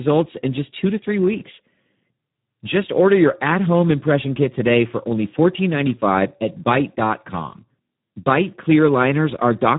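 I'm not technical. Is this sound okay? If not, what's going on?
No. The speech runs through a low-quality Speex codec the whole way through, an older voice-chat compression squeezed very hard. That makes it sound rough, hoarse and a bit robotic, and everything above about 3.8 kHz is gone, so it sounds muffled, like a phone call.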